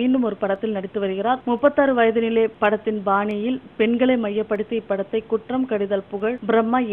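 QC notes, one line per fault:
0.56 s, 3.31 s, 4.55 s, 6.20 s: dropped samples, likely. Each time a single sharp click is heard where a fraction of a millisecond of the stream appears to be missing, so the waveform jumps abruptly to a later value. This shows as a step in the waveform and a thin vertical line across the spectrogram.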